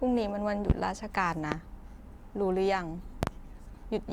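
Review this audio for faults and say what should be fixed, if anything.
Loud pops hit at 0.70, 1.52 and 3.23 s, the last a double pop. Each is roughly 20 dB above the speech, likely from voltage glitches. Check cables, switches and grounding.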